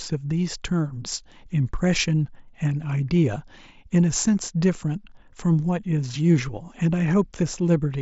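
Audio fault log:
Nothing stood out on listening to this speech clip.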